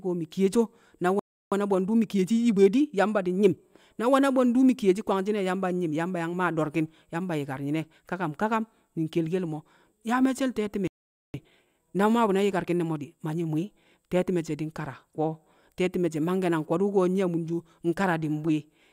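Speech with two playback stalls, each followed by time-compressed catch-up. At 1.19 s the sound cuts to silence for about 0.32 s. At 10.87 s it drops out again, this time for about 0.47 s. The likely cause is the player running short of buffered data, or its output thread being blocked, so nothing reached the output until it recovered. After each gap the speech is hurried along at normal pitch. From 1.52 s to 3.66 s it runs about 1.15 times faster. From 11.34 s to 14.34 s it runs about 1.1 times faster, starting with "she̱ di̱". The player shortens its backlog by snipping out small slices and cross-fading the joins.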